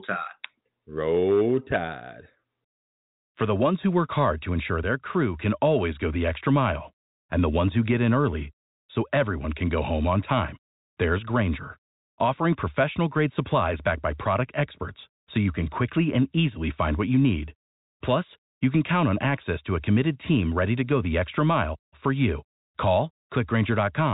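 No technical faults can be heard in the speech, which has the narrow bandwidth of G.711 telephone coding, with nothing above 3.8 kHz.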